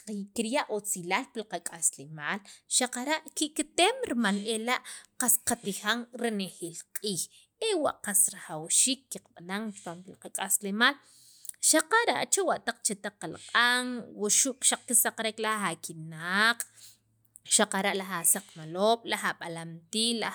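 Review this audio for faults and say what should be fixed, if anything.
Nothing in this speech recording needs fixing, as no technical faults can be heard at any point. No repair or change to the recording chain is called for.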